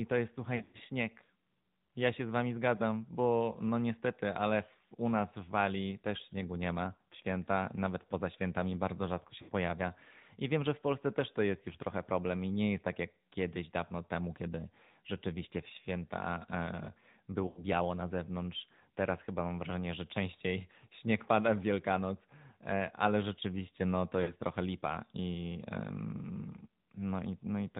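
The whole speech clip runs through the AMR narrowband mobile codec: nothing above 4 kHz, with a plainly buzzy, synthetic edge that fits a mid-rate mode around 10 kbps.

Lost AMR speech frames hit at 0.56 to 0.82 s, 9.42 to 9.51 s, 17.48 to 17.61 s and 24.22 to 24.34 s. In each one the decoder stretches the last good sound into a fading warble, and the speech returns rough for a moment.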